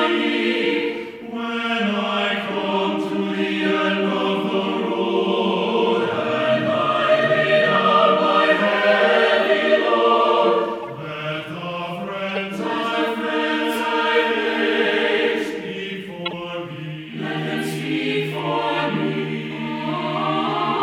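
Corrupt frames get decoded at 1.60 s, 10.82 to 10.85 s, 12.29 to 12.37 s and 16.26 to 16.33 s. Damaged bits misplace energy, giving brief chirpy blips, the last two noticeably louder.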